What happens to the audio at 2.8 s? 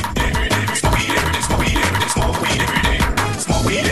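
Nothing goes wrong at 2.8 s: the audio plays straight through that moment intact, with no dropout, click, glitch or other fault.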